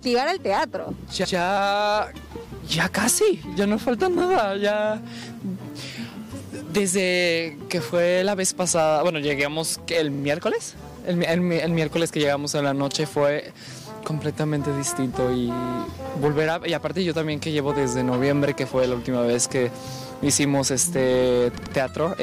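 Repeated frames stutter the audio at 1.24, 10.13, 15.57 and 21.57 s. Blocks of 128, 43, 64 and 85 ms replay one to three extra times. Unlike an echo, each copy is exact and undecayed, and the playback runs longer.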